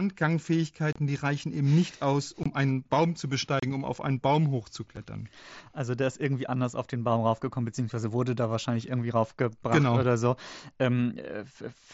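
Unconcealed Bluetooth headset packet loss cuts the speech at 0.93–0.96 s, 2.43–2.46 s, 3.60–3.63 s and 4.96 s. Lost headset frames are replaced by silence or an idle pattern rather than patched, leaving 7.5–30 ms holes with abrupt edges over the light grain of the mSBC codec.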